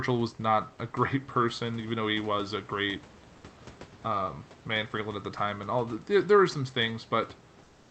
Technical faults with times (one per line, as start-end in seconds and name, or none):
7.63-7.91 comfort noise in place of the background